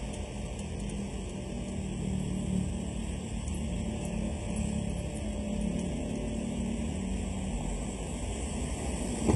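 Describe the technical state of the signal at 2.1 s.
At 2.1 s the signal carries channel delay (comb filtering), present across the whole clip rather than only at this moment. One channel trails the other by a little under half a millisecond, and summing them to mono cancels the shared sound in regularly spaced bands, the first near 1.5 kHz and the rest at odd multiples above it. The result is hollow and phasey. On a spectrogram these show as fixed dark horizontal stripes that do not move with the sound.

The treble at this point is also gritty and metallic, with a synthetic sheen that does not match the body of the sound below it. This is likely HE-AAC compression with heavy damage, consistent with a very low bitrate around 16 kbps. The upper range is rebuilt from copied lower bands, so harmonics fail to line up across the crossover. On a spectrogram the region above the crossover looks patchy and repeated, with coarse, blocky energy instead of fine detail.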